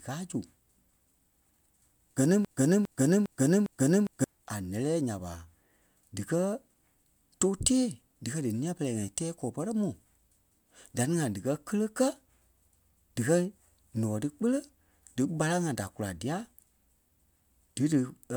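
From 2.45 s to 4.24 s the speech sticks: a fragment about 0.41 s long plays four times in a row, each pass identical and butted straight against the next, so the sound stutters mechanically instead of moving on. This is a broken-record loop. The likely cause is the player, encoder or stream stalling and resending the last fragment it held. Whatever should have been heard during those 1.8 seconds is lost, not delayed.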